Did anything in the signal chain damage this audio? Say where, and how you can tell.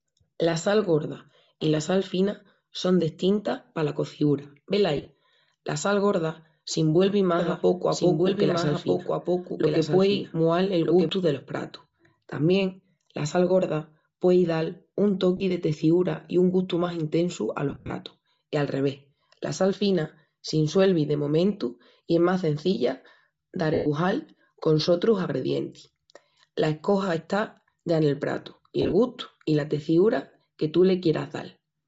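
Yes. At the codec stage, the whole clip carries Bluetooth LC3 compression: the speech has a breathy, grainy top end where the upper spectrum is thinned and noise-filled. The damage is plainly audible and fits LC3 at around 32 kbps, with 10 ms frames.

Lost LE Audio frames occur at 4.97 s, 15.37 s, 17.70 s, 23.74 s and 28.82 s. At each point, the decoder repeats the last spectrum with scrambled phase, so the speech turns into a short noisy smear. The worst is at 17.70 s, between "un gustu más intesu" and "I a", where about 130 ms is concealed over 200 ms.

A doubled audio track runs from 7.37 s to 11.09 s, ending just before "delos pratus". A full-band copy sits roughly 1.5 s behind and about 5 dB down, with no room colour, and it starts and stops abruptly. This likely comes from a second, slower capture path or an edit holding two copies.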